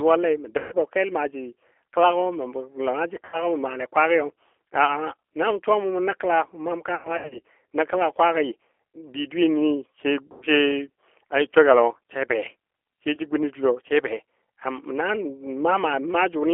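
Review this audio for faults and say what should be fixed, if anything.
G.729 codec throughout: the speech is confined to a 300 Hz to 3.4 kHz line band and rebuilt at 8 kbit/s from a vocal tract filter and a few pulses per frame, so it sounds rough and synthetic. Unlike simple low-pass filtering, which only dulls the highs, the graininess sits inside the remaining band. To prevent it, carry the call on a wideband codec such as G.722 or Opus wherever the link permits.

VoIP packet loss concealed by the speech codec occurs at 0.58–0.74 s (140 ms lost), 3.25–3.42 s (80 ms), 6.95–7.42 s (280 ms scattered, longest gap 100 ms), 10.32–10.45 s (100 ms) and 13.15–13.20 s (20 ms). The decoder stretches its last pitch and filter into a fading buzz or coloured noise, and the speech stays weak just afterwards. Unlike a raw dropout, the gap is filled rather than simply cut. To prevent it, improve network reliability and add jitter buffering or forward error correction.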